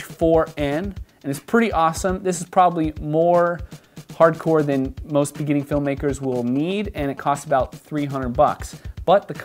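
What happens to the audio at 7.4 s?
At 7.4 s the audio carries GSM signalling bursts, running from 5.62 to 7.66 s. A nearby 2G phone's radio bursts are rectified into the audio path, giving a galloping dit-dit-dit of short 217 Hz buzzes, roughly 20 dB below the sound. On a spectrogram this appears as evenly stacked harmonics of 217 Hz in short groups; the waveform shows clustered rectangular pulses.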